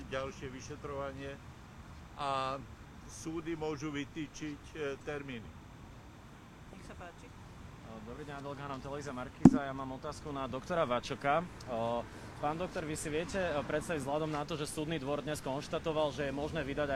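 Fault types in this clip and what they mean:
Timecode bleed: linear timecode from a nearby track or cable has leaked into the audio, switching between tones around 1 kHz and 2 kHz at a 30-frame-per-second code rate, heard as a constant chirping warble roughly 30 dB beneath the main sound from start to end. On a spectrogram it shows as two narrow horizontal bands near 1 kHz and 2 kHz, flickering rapidly; the waveform carries a faint square-edged ripple riding on everything.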